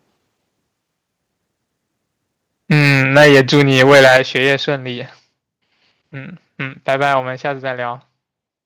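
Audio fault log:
2.71–4.53 s, microphone overload: the input level was likely set too high, driving peaks about 12 dB past the converter's limit. A sizeable share of samples, around 7 percent, have their tops flattened, so the loudest syllables carry a harsh, crackling edge.
6.88–7.14 s, microphone overload: the input likely ran slightly too hot again, about 2 dB over full scale. Only a small fraction of samples are cut off, giving a brief, lighter rasp on the strongest peaks.
3.17 s, 4.17 s and 7.2 s, microphone volume stepped down: the call software likely reacted to the clipping by cutting the device's input gain in single jumps of about 2 dB, about 8 dB and about 4 dB. Voice and background drop abruptly together, each step coming during or just after distorted peaks.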